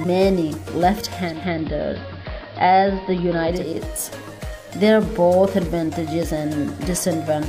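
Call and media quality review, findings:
Digital radio blending to analogue, 1.18–3.81 s: hybrid tuner cross-fades over 325 ms to AM, faint hiss; smooth fades, not abrupt dropout gaps.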